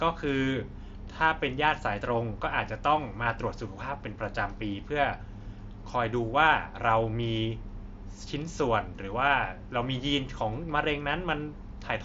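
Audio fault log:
No faults are present in this speech clip. The Bluetooth mSBC headset codec carries the speech with nothing above about 7.7 kHz and a light graininess on the louder passages.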